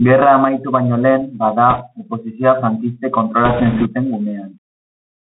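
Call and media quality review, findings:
Narrowband, muffled sound throughout, nothing above 4 kHz; scratchy s sounds, granular hiss under speech, loud bright passages overrun. Component: Bluetooth CVSD headset codec, fits a 64 kbps one-bit stream whose adaptive step lags fast rises. Distinct from plain lowpass filtering: the hiss and slope distortion travel with the signal.

Crackly rushing noise, 1.70–1.83 s, between "baino lehen bada" and "oposizioa frankistek". Bit errors on a Bluetooth voice link, a couple of percent. Each flipped bit nudges the step, by an amount that grows with speech level, then decays.

Denser, longer rush, 3.45–3.87 s, after "lehen bada oposizioa frankistek". Same bit errors, roughly double the rate. Distinct from packet loss: no dropouts or loud clicks, only noise.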